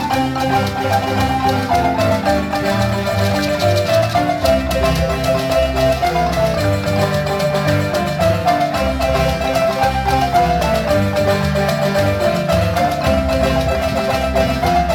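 No technical faults can be heard anywhere in this audio.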